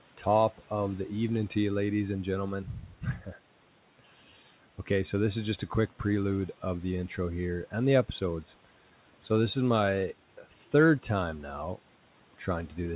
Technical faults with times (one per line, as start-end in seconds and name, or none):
2.66-3.34 speech cut by the noise suppressor
10.43-10.73 speech cut by the noise suppressor